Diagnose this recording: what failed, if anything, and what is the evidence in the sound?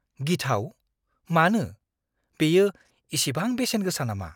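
Nothing failed, and there is no evidence of any fault in the sound of this recording.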